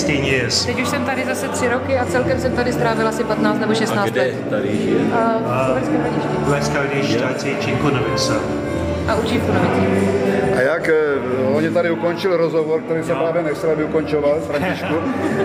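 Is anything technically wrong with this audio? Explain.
No, nothing technically wrong can be heard in this audio. The sound carries on steadily, with no interruptions or disturbances to point to.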